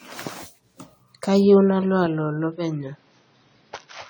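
From the start, the speech sounds swirly, smeared and hollow. Consonant attacks blur, more than the 96 kbit/s AAC-LC character alone would explain. This is generation loss, likely from several rounds of lossy re-encoding, each on a fresh frame grid, piling up noise and spectral holes.

At 2.06 s, with no gap, the sound turns dull and boxy until the end. Nothing above 6.2 kHz remains. The level drops about 5 dB, and a new noise floor appears roughly 35 dB down. This is an input switched to a poorer device, likely a narrower-band microphone or headset.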